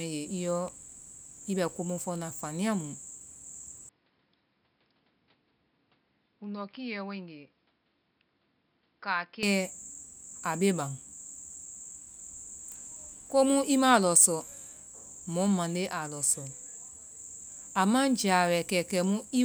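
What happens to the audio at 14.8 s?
Nothing goes wrong at 14.8 s: the speech carries on intact through that moment, with no dropout, click, distortion or other fault to be heard.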